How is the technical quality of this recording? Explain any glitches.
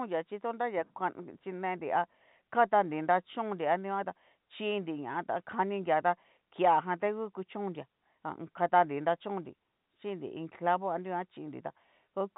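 No glitches turn up anywhere in this speech recording. It comes through G.711 telephone coding, so nothing above about 3.8 kHz is present and the faint quantisation noise that rides along with the level is normal for that 64 kbps path.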